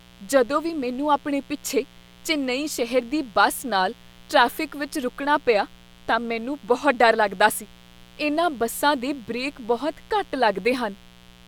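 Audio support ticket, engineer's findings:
Steady, raspy buzz under the speech, present start to end, sitting roughly 30 dB below the speech. Mains buzz on a 60 Hz supply. Likely a dimmer, rectifier or unshielded cable injecting sharp switching spikes twice per mains cycle, so 60 Hz harmonics stack up into the kilohertz range and give the edge. Check grounding, shielding, nearby dimmers.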